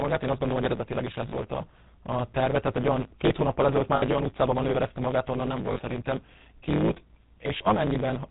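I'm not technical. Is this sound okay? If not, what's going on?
No, this speech has three separate problems.

The first is a block size mismatch (truncated). One stage of the audio chain hands over blocks of sound that are longer than the next stage accepts, which fits a 512-sample block, and the leftover end of each block is discarded. Those regular cuts produce a steady buzz at about 109 Hz throughout. Because pieces are missing, the speech runs about 1.16 times faster than normal, yet the character of the voice stays the same.

The second is the GSM full-rate codec, the early mobile-phone speech compressor. It rebuilds the voice from a simplified model of the throat and mouth, driven by a coarse train of pulses, and it discards everything above 4 kHz. The codec damage is plainly audible across the whole clip. The speech sounds muffled, and it has a buzzy, gravelly roughness.

The third is lost GSM frames. 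When a chunk of the phone signal fails to arrive, the decoder repeats the last good chunk, usually at falling volume from the second missing chunk on. This produces a brief metallic, ringing smear instead of the actual sound. It happens four times:
from 1.30 to 1.34 s, after "hogy eredetileg is ez" and before "a a terve tehát";
from 3.96 to 4.03 s, after "olyan két hónappal ezelőtt" and before "olyan utcában manőverezte magát";
from 5.72 to 5.81 s, after "manőverezte magát onnan nem";
from 7.58 to 7.62 s.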